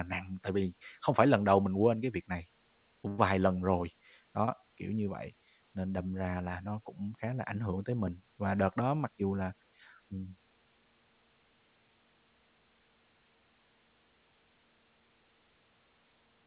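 At 3.08 to 3.20 s, just before "lần rồi", there is a burst of packet loss. About 100 ms of speech is missing. The receiver held the last sound and faded it, so a brief buzz or hiss replaces it.

At 4.46 to 4.49 s, between "lần rồi" and "kiểu như vậy nên", a short concealed packet loss leaves a quick smear or wobble. About 20 ms never arrived and was patched over. The band stops at 4 kHz throughout, which fits a G.711 A-law call path.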